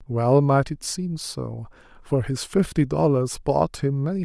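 Throughout, the speech has a grainy, breathy top end that is filled with noise rather than simply cut off, likely Bluetooth LC3 compression at around 48 kbps.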